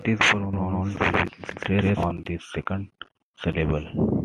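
From 0.53 to 2.11 s the speech carries a doubled audio track. A second full-band copy trails about 150 ms behind at roughly equal level, without decay or room colour. It likely comes from a slower second capture path. It cuts off abruptly before "the second".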